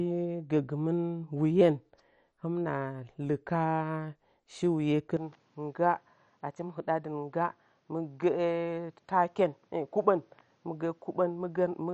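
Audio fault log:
throughout: MP2 compression. The speech was most likely coded with MPEG Layer II at a low rate, which fits a bitrate around 48 kbps. The coder had too few bits for its sub-bands, so every band above 11.3 kHz is shut off and the remaining bands are quantised coarsely. As a result the speech sounds dull and carries a plainly audible gurgling, granular roughness, with upper detail flickering in and out as bands switch.
5.17 s to the end: input switched to a poorer device. Midway through, recording likely moved to a lower-grade microphone or headset path. The change happens with no gap, but from 5.17 s the band narrows further, with nothing above 7.9 kHz, so the speech turns duller and boxier. The level drops by about 5 dB, and a faint new background noise appears well beneath the speech, adding a change of tone and noise on top of the codec damage.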